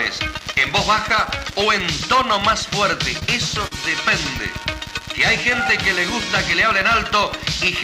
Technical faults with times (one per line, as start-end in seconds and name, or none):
3.19-3.23 short concealed packet loss
3.67-3.73 short concealed packet loss